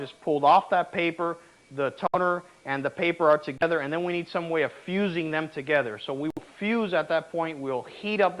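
At 2.07 to 2.16 s, 3.58 to 3.63 s and 6.30 to 6.39 s the audio drops to silence for 69 ms, 33 ms and 64 ms, then resumes. This is likely a Bluetooth stall: interference delayed packets, the headphone buffer emptied, and playback waited for retransmissions. Unlike codec packet-loss concealment, which fills gaps with smeared or repeated sound, these gaps are true silence followed by an abrupt restart, either where the sound stopped or slightly further on.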